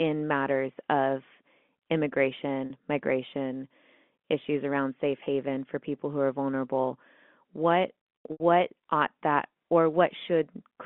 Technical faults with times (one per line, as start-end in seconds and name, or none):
2.66-2.70 packet loss with pitch repetition
5.24-5.26 packet loss with pitch repetition
8.32-8.40 packet loss with pitch repetition